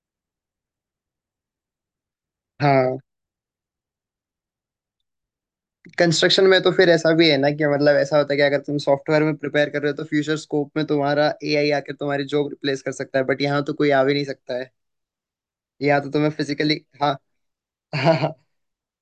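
Speech recording, no technical faults heard anywhere in it.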